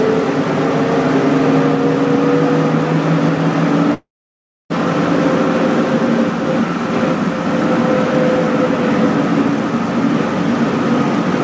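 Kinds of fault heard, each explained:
Long network dropout: packets likely stopped arriving for 0.76 s; the receiver briefly stretched the last sound into a fading buzz, then silence until audio resumes.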